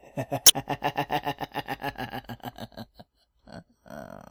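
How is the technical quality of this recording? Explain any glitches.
The recording has one glitch, near the start. From 0.43 to 0.53 s there is damaged data in the compressed stream. Some bytes were corrupted. The decoder misread those frames and lost sync. It then hunted for the next valid frame header. The result is a brief chirp, squawk, click or short hole.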